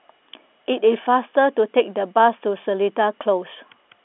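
No technical faults can be heard anywhere in this speech recording. It comes through a telephone path using G.711 mu-law coding, so the sound is confined to roughly the 250 Hz to 3.5 kHz line band with the narrow, boxy quality of an ordinary phone call.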